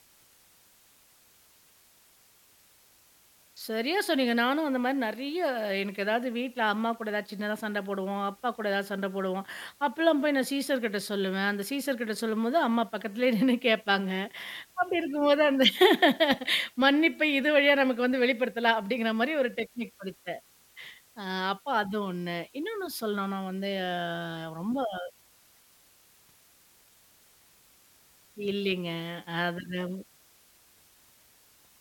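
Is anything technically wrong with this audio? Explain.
Yes. Throughout the speech, the audio runs at low bit depth with dither, around 9 bits. Dither was added before each sample was rounded to so few levels, turning the quantisation error into steady white noise. The result is a constant, even hiss, roughly 30 dB below the speech, without any distortion.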